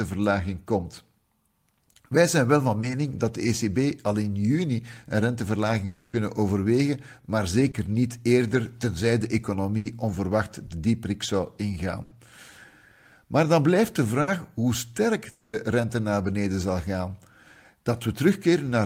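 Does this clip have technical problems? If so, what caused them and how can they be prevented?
Yes. Short concealed packet loss at 2.81 s and 7.71 s: about 20 ms of speech never arrived in time, so the receiver extended the preceding sound and blended back, leaving a brief smear. A larger jitter buffer and forward error correction would let the receiver recover these packets rather than guess.

Burst of packet loss at 9.77 to 9.87 s, 12.03 to 12.13 s and 14.21 to 14.29 s: roughly 80, 80 and 60 ms went missing, filled by a held buzz or fading hiss before the speech resumes further on. Prioritising voice traffic on the network and adding redundancy across consecutive packets would keep short bursts from wiping out whole syllables.

Long network dropout at 5.85 to 6.15 s and 15.31 to 15.55 s: for about 280 ms and then 220 ms the speech is replaced by a continued, decaying sound with no silent stretch, then returns with that portion gone, likely a stall in the connection. 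A more stable link, such as wired rather than congested wireless, and monitoring for connection stalls would prevent these longer gaps.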